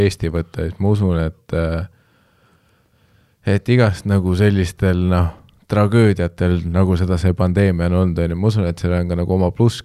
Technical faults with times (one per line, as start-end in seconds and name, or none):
5.96 dropped samples